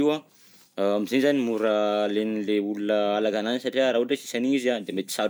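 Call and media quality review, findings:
Call and media quality review findings: no faults heard in this speech clip.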